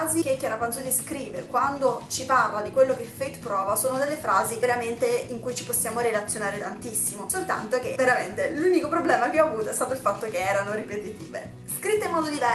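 Nothing technically wrong is audible; the sound carries the band-limited top end and coding texture expected of an Opus WebRTC call path working as intended.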